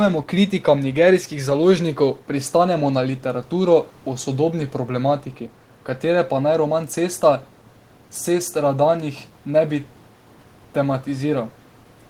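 No technical faults can be heard, so there is nothing to describe in time order.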